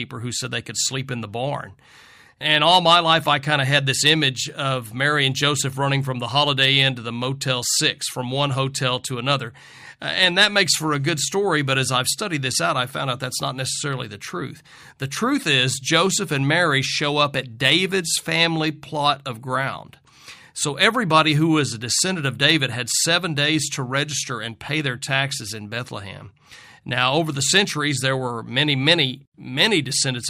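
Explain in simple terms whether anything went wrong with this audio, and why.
Nothing went wrong here: listening all the way along, there's no glitch, dropout or odd noise anywhere in the recording.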